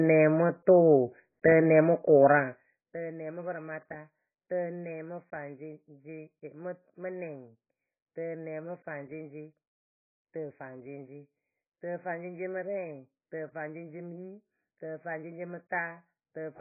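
From start to finish, the speech sounds dull, smeared and watery. Nothing is heard above about 2.5 kHz, so sibilants lose their edge and turn into a soft fizz. Sustained vowels warble as the spectrum thins out. This points to AAC compression, likely AAC-LC at a very low bitrate, around 14 kbps. The encoder had too few bits for its 1,024-line frames. It dropped the upper bands and coarsely quantised the rest.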